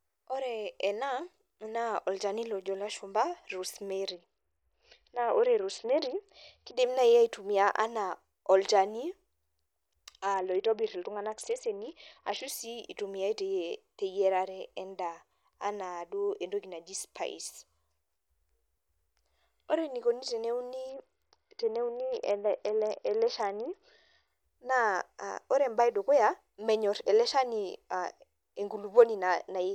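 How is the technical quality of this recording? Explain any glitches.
The speech is marred by three Bluetooth SBC bit pool drops, from 4.09 to 6.77 s (ending just before "naaji aitumia anaa olchani"), 10.34 to 12.48 s (ending before "sii itumiae") and 20.89 to 24.27 s (starting after "ore enikoni teneuni"). In each, the link cut the SBC bit allocation sharply, which fits a fall from a bit pool near 31 to about 7, roughly 61 kbps. The highest sub-bands lose their bits and the rest are coarsely quantised, so the treble goes dull and a gritty grain appears until quality snaps back.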